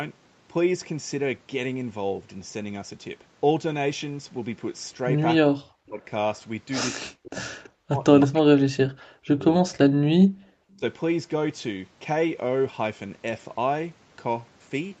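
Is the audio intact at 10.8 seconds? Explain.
No. From 10.75 to 10.83 s the speech briefly sinks by roughly 15 dB, a dip of under a tenth of a second. This is likely speech suppressed in double talk: with both sides talking, the echo canceller mistook the talker for loudspeaker echo and turned both down.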